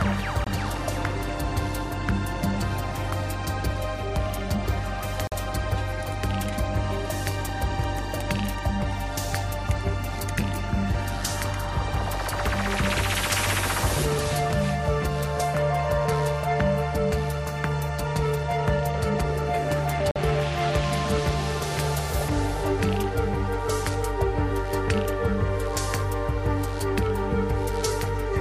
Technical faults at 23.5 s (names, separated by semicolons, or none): none